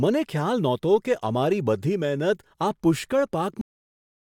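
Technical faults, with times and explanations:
3.61 s to end, cut-off end: the speech halts mid-sound at 3.61 s and drops straight to digital silence with no decay, because the final buffers were never written. Unlike a dropout, no sound resumes afterward; unlike a fade-out, the level never tapers first.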